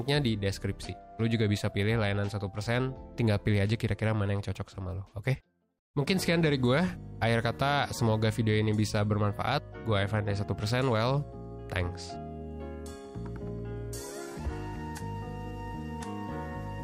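Nothing stood out as a technical problem on listening to the recording.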